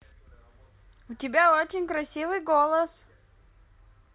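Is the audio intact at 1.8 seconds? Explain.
Yes, at 1.8 seconds the speech plays through cleanly, with no dropout, click, distortion or other fault to be heard at that point.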